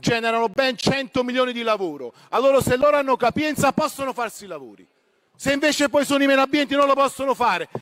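At 0.54 to 0.57 s a Bluetooth dropout cuts about 23 ms to silence, likely one late packet. Unlike a stutter, the sound resumes further on, nothing repeated.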